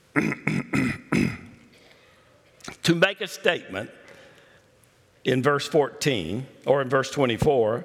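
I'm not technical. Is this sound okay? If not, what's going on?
No. Hard clipping at 0.19 to 0.48 s, and briefly at 3.03, 3.48 and 6.71 s: the loudest moments were too big for the recording to hold, so their tops got sliced flat. That adds a rough, crackly edge, strongest around 3.03 s.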